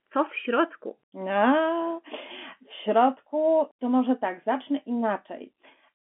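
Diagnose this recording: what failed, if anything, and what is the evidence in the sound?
Nothing has failed here: the speech carries the narrow band of an ordinary G.711 telephone line, confined to 200 Hz to 3.4 kHz with nothing above 3.7 kHz, which fits 64 kbps mu-law coding working as designed, leaving at most a faint quantisation noise that follows the signal level.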